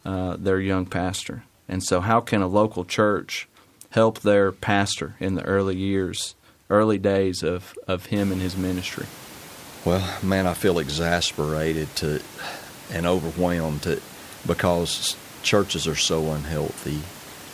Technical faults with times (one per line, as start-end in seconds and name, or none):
none